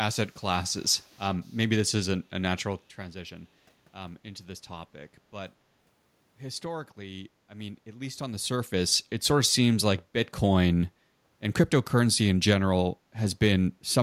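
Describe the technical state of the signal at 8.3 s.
At 8.3 s the speech is inside a burst of zipper noise running from 8.18 to 8.84 s. The level shifts in 2 dB steps, about ten per second, totalling roughly 15 dB. Each unsmoothed step clicks, giving a ticking rasp. The waveform envelope looks staircased, with faint vertical broadband lines on a spectrogram.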